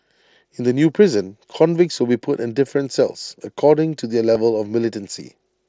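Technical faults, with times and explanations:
1.95 s and 4.35 s, concealed Bluetooth headset packet loss: each time, a single 7.5 ms chunk of the mSBC stream went missing between headset and phone. The receiver filled it with the best-matching slice of recent audio, so each dropout is nearly hidden.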